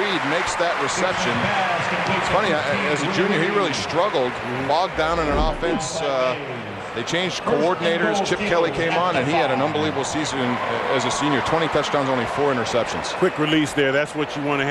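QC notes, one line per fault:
No faults detected.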